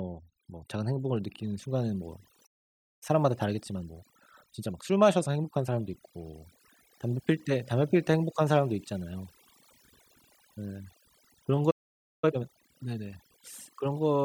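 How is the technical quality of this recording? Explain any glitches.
The technical quality is poor: heavy-handed noise suppression colours the whole clip, and playback breaks down twice, each time followed by a hurried stretch.

Overdone noise removal runs throughout. The noise reducer was set far too aggressively, so any frequency band sitting close to its noise estimate gets pulled down or switched off entirely, and the softer parts of the speech are removed along with the noise. The background collapses into an unnatural near-silence scattered with twinkling artefacts.

A playback stall occurs from 2.46 to 3.03 s and again from 11.70 to 12.24 s. The likely cause is the player starving for data or having its audio thread blocked, so the output stopped until it recovered. Each gap lasts roughly half a second, about 0.55 s and 0.52 s. The speech cuts out abruptly mid-flow.

Time-compressed catch-up follows each stall. 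To work off the backlog, the player snips out small chunks of audio and cross-fades across the joins, speeding delivery without shifting pitch. From 3.03 to 6.03 s the speech runs at 1.15 times normal speed, a mild rush. From 12.24 to 12.76 s it runs at double speed, so that brief passage sounds noticeably hurried.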